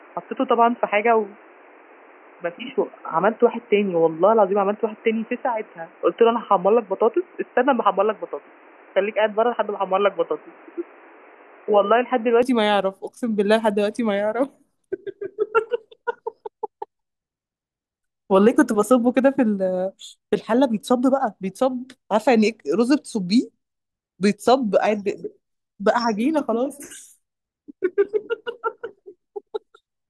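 From 0 to 12.4 s the speech is dull and boxy, with nothing above 3 kHz and a new noise floor roughly 30 dB down, likely an input switched to a poorer device. A spectrogram shows a flat ceiling at 3 kHz that lifts abruptly at 12.4 s, without a gap or level step in the waveform.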